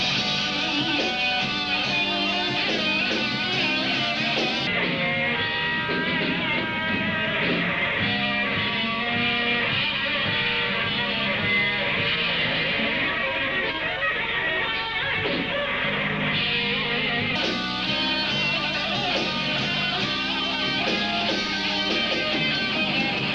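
From 4.67 s to 17.35 s there is a section at the wrong speed. The audio was likely fitted to a mismatched clock, so it runs at 0.772 times its recorded rate. The sound slows and drops about five semitones, turning deep and sluggish until normal speed returns.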